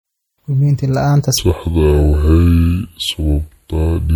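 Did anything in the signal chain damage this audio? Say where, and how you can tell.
Yes. Throughout, the speech carries the smeared, watery detail of MP3 compression even though the band extends to about 20.1 kHz. That points to a codec stage: the audio was likely encoded at a low bitrate, around 64 kbit/s, then saved again as high-bitrate MP3, which cannot restore what the first pass discarded.

From 1.38 s to the end at 4.16 s, the speech suddenly drags and drops deep, roughly seven semitones lower, running at 0.621 times normal speed. Because pitch and tempo fall together, this is a section at the wrong speed, likely from editing or playback using the wrong clock.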